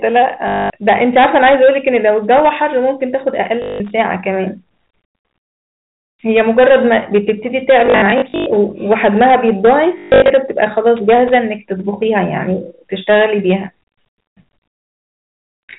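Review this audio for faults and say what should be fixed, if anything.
Hard clipping runs throughout. A stage is overdriven by about 12 dB, so a few percent of samples have their peaks cut flat, which adds harsh fuzz to every loud syllable. Lowering the gain ahead of that stage, so peaks keep headroom, would prevent it.

Packet loss with last packet repeated occurs from 0.48 to 0.70 s, from 3.62 to 3.80 s, from 7.86 to 8.46 s (scattered, with the longest run 100 ms) and from 9.98 to 10.30 s (longest run 140 ms). Lost packets were replaced by repeating the previous one, which causes a robotic buzz near 50 Hz, consistent with 20 ms packets. A steadier network path, forward error correction, or proper packet loss concealment in place of plain repetition would prevent it.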